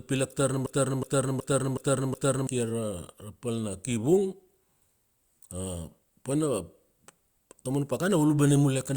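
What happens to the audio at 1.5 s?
At 1.5 s you're mid broken-record loop, running 0.66 to 2.47 s. One 0.37 s scrap of speech repeats five times back to back, identical each pass. The stream likely stalled and kept resending its last fragment, so the real audio there is lost.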